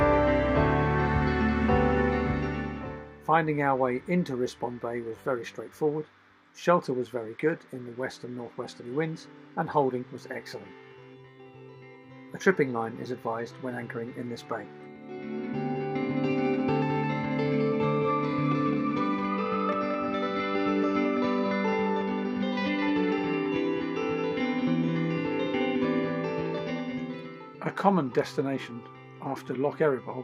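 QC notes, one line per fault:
6.84–10.11 s and 16.43–19.25 s, Bluetooth SBC bit pool drop: treble dulls and gritty noise rises, consistent with the bit pool falling from 31 to 15, around 105 kbps, starving the upper sub-bands.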